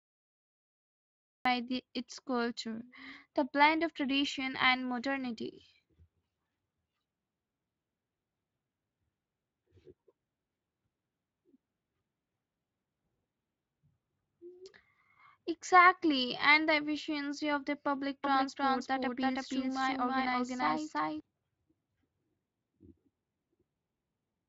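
The first 1.45 s are digital silence, and the speech then cuts in mid-sound at 1.45 s. This is a cut-off start: capture began after the talker had already started, so the sound arrives with no natural attack and no fade. A speaker pausing before talking would leave room tone or breath in that gap, not digital silence, and the first sound would build up rather than appear already in progress.

From 18.24 s to 21.2 s a doubled audio track is audible. A second full-band copy of the speech runs about a third of a second behind the original, at roughly the same level. The likely cause is the signal being captured a second time through a slower path. It differs from an echo or room reflection because there is only one repeat, and that repeat does not decay or take on any room colour. It also switches on and off abruptly at those two times, which acoustic reverberation never does. The Speex coding behind it keeps the band up to about 7.6 kHz with only light codec roughness.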